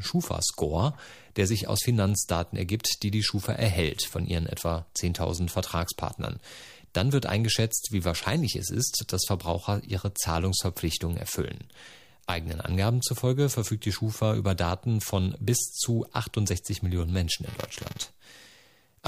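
Buffer tearing sets in at 17.45 s and runs to the end at 19.08 s. The writer and the playback hardware have drifted out of step on the ring buffer, so in every period a small slice of the speech is replaced by audio from roughly 10 ms earlier, with hard joins on both sides. Those splices repeat at 345 Hz, which fits a 128-sample buffer, and produce a steady robotic buzz riding on the speech wherever there is signal.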